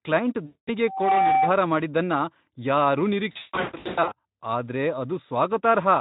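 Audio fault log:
0.45–0.69 s, VoIP packet loss concealed by the speech codec: about 220 ms missing. The Speex decoder stretches the last pitch and filter into a buzzy tone or coloured noise that fades, then recovers.
3.31–4.14 s, VoIP packet loss concealed by the speech codec: 600 ms lost, scattered over 800 ms, with the longest gap 160 ms. This gives repeated buzzy or noise-like, decaying fills, with weak recovery between gaps.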